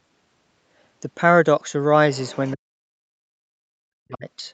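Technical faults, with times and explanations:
2.12–2.53 s, other side's voice leaking through: a faint second voice sits behind the main speech, about 25 dB below it. This is likely loudspeaker playback of the far end reaching the microphone and surviving the echo canceller, so a weak, partly cancelled copy of the other talker comes through for a little under half a second.
2.54–3.25 s and 3.41–4.26 s, speech suppressed in double talk: in each stretch the main voice sinks, dropping by as much as about 40 dB for roughly 0.7 s. The likely cause is both sides speaking at once. The echo canceller could not tell the local talker from the loudspeaker echo and turned the whole signal down, taking the wanted speech with it.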